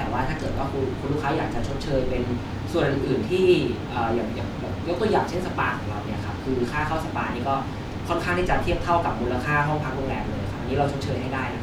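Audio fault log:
No faults detected in this recording.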